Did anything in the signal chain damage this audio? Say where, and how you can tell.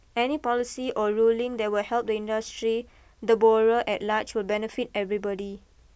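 No, nothing in this recording stood out on listening as damage from any stage of the signal chain.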